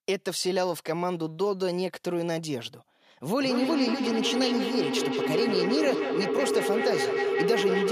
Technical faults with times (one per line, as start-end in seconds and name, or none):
3.39-7.92 feedback howl